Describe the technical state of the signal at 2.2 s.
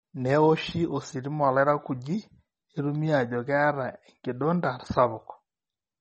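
At 2.2 s the speech has the same damage it carries from start to finish: nothing above 8.4 kHz, so the top end sounds dull and boxed in, plus a watery, swirly texture and some metallic chirping on the s sounds. That's likely MP3 compression, and a bit-starved encode that fits something around 32 kbps. Short of bits, the encoder chops the treble at a fixed point and drops quieter frequency detail that blinks in and out between frames.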